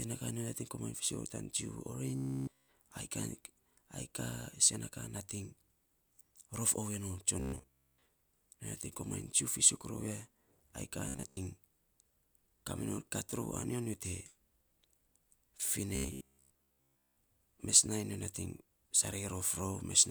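Audio most likely arriving too seldom, with the software looping the last roughly 15 ms buffer, turns this speech into a robotic sound from repeated short buffers: a rigid, metallic 66.8 Hz buzz at 2.16–2.68 s, 7.40–8.06 s after "rof oovei non", 11.09–11.38 s after "ai kaa", and 15.95–17.17 s. The buzz fills the first two spans entirely and most of the last two.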